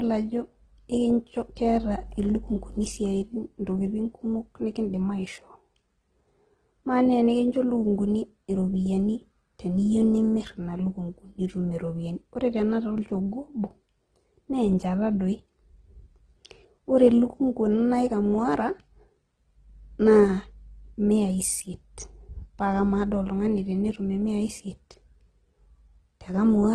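Speech, with transcoding between lossy codecs throughout. Two layers of compression smearing and warbling are heard together, likely from low-bitrate AAC re-encoded to Opus. A spectrogram shows a flat ceiling with nothing above 12 kHz.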